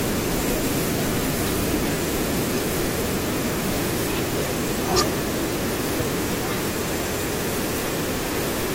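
Speech, with two brief glitches where the sound skips ahead: one from 4.45 to 4.48 s and another from 5.99 to 6.02 s, each lasting about 30 ms. The likely cause is a broken MP3 bit reservoir. After frames were dropped, the following frames reached back for data they had stored in earlier frames and decoded bytes that belonged to other frames. Each glitch is roughly one 24 ms frame long.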